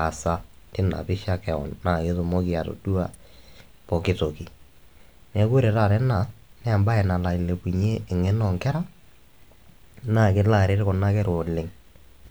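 At 3.14 s, right after "keon naa ketumoki atodua", a sharp snap cuts across the speech: an electrical switching spike, likely from a nearby switch, motor or static discharge arcing briefly and coupling into the audio line. It peaks at around -30 dBFS, well below full scale but sudden. On the waveform it shows as a narrow spike lasting barely a dozen milliseconds; on a spectrogram it forms a thin vertical stripe spanning nearly the whole frequency range.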